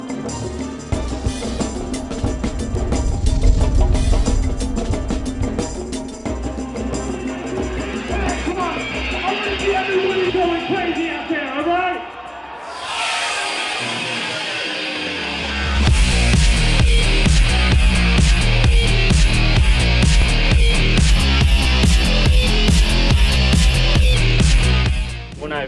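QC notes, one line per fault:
21.1–24.14 s wrong sample rate: sound runs 1.09x fast and 1.47 semitones sharp together, which fits 22 kHz material played back at 24 kHz without conversion.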